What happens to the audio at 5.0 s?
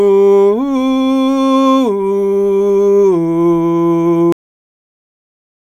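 At 5.0 s the music is already gone, because of a cut-off end: the final buffers were never written or played, so the sound halts mid-note at 4.32 s and drops straight to digital silence, with no decay, through to the end at 5.74 s.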